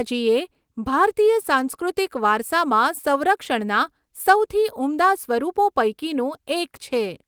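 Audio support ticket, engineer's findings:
No audible faults found on playback; nothing to escalate.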